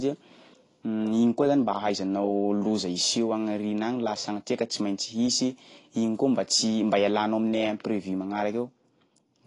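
From start to finish, the speech carries plainly audible codec damage, likely from AAC compression of the AAC-LC type. Nothing sounds above 10.6 kHz, so the top of the spectrum is simply missing. The encoder quantises each frame's frequency lines against a hearing model, here at a low bitrate around 32 kbps. With so few bits, the speech sounds dull and smeared. Sibilants and held sounds take on a warbling, fizzy texture.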